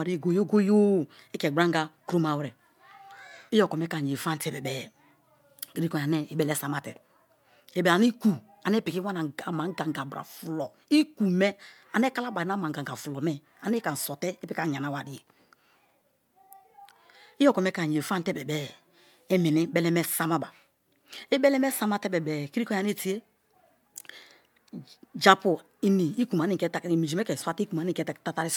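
Nothing technically wrong can be heard anywhere in this recording of speech, which keeps an even, unbroken signal throughout.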